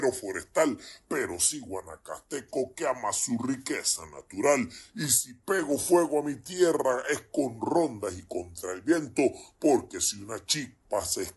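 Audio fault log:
Throughout, wrong sample rate: everything runs slow and sits low, at about 0.73 times normal speed and roughly 5.5 semitones flat. Speed and pitch drop together by the same ratio, which fits 44.1 kHz material played back at 32 kHz without conversion.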